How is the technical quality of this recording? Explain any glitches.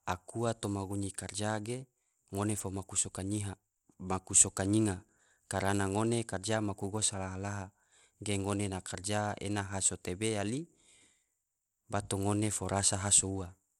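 The recording has clearly audible codec damage from start to finish, likely from Bluetooth SBC compression. The top end stops at about 17 kHz, and the treble that remains flickers, with a gritty grain and aliasing riding on the speech. SBC divides the signal into a few wide sub-bands and allocates bits without a hearing model. At a data rate consistent with roughly 96 kbps, the upper bands are starved of bits and the rest are coarsely quantised, which produces this rough, unstable brightness.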